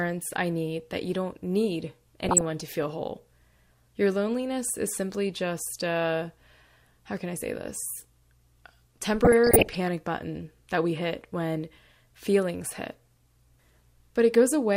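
DAB burbling appears twice in this speech. From 2.24 to 2.45 s, after "that you don't need" and before "to feel whole", and again from 9.22 to 9.89 s, just before "button that we hit", short blips of noise sit over the voice. Bit errors at a rate of around half a percent slipped past error correction into the MP2 data, so corrupted samples put short noise blips in single sub-bands and corrupted scale factors make individual sub-bands jump in level for up to a frame. The two lengths fit about 9 and 28 damaged frames. On a spectrogram this shows as scattered bright horizontal blocks, each one sub-band wide and up to one frame long. The waveform shows brief, uneven bursts in level.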